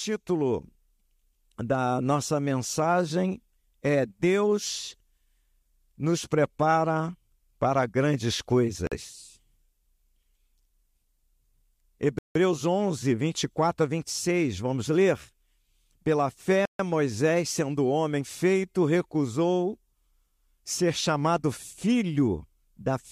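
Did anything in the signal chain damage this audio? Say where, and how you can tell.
Yes: three blocks of digital silence from a driver or buffer underrun. The speech drops to silence after "nos prepara para grandes" at 8.87 s (46 ms, which fits a 2048-sample buffer), then at 12.19 s (168 ms) and 16.65 s (139 ms). The gaps cut in and out with no fade and hold no concealment.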